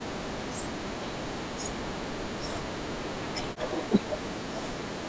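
From 0.0 to 4.79 s the speech dips and breaks up, sinking by about 40 dB at its deepest. The likely cause is speech suppressed in double talk. The echo canceller mistook the talker for loudspeaker echo and turned the sound down for about four seconds.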